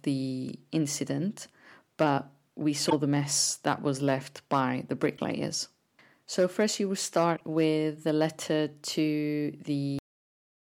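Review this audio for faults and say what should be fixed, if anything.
Three short glitches break into the speech: at 2.86 to 2.93 s, between "the incident but we" and "the mess that was"; at 5.14 to 5.19 s, just after "was left by the"; and at 7.33 to 7.41 s, just before "with the letter". Each is damaged data in a compressed stream. Corrupted bytes made the decoder misread frames, lose sync and skip ahead to the next valid header. Fix this by re-encoding or re-fetching from an intact source and verifying checksums on transfer.

At 9.99 s the speech stops dead in the middle of a sound and falls straight to digital silence with no natural decay. This is a cut-off end: the final buffers were never written out, so the recording ends abruptly instead of finishing its last sound. Prevent it by flushing and closing the encoder and output file properly before stopping capture, so the last buffers are written.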